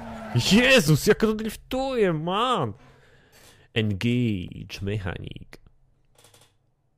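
Two brief blips of damaged data in a compressed stream interrupt the sound, at 0.87 s and 4.48 s, each lasting under 20 ms. At each point a stretch of the encoded data has been corrupted, so the decoder misreads those frames, loses sync and scans for the next valid frame header, producing a short chirp, squawk, click or hole. On a spectrogram each shows as a thin vertical line or gap; the waveform shows a tiny burst of mismatched samples or a dropout.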